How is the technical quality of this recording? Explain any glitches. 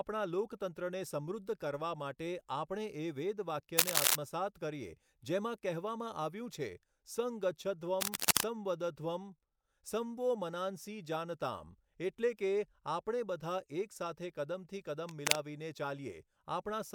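The recording is marred by three short bursts of cable scratch noise over the speech. They occur at 3.77–4.16 s (ending just before "કરીએ જેમાં" and standing well above the voice), at 8.01–8.46 s, and at 15.07–15.37 s (right after "બધા એક સાથે કદમથી"). The latter two sit somewhat above the speech. They are likely caused by a worn lead or connector being moved, its contact resistance jumping about erratically. They sound like harsh rustling. On a spectrogram they show as ragged broadband smears, and on the waveform as dense, jagged spikes.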